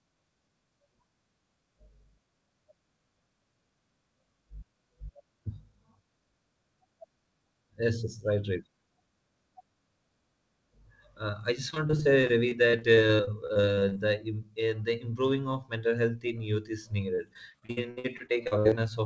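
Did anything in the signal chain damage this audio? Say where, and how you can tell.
Yes, in the network stage: packets were repeatedly lost between 11.70 and 13.97 s and again between 17.15 and 18.79 s, giving repeated packet loss (robotic sound). The decoder bridged each hole, up to 60 ms long, by extending the preceding sound, so 22% and 30% of the two stretches are concealed, and the sound turns choppy.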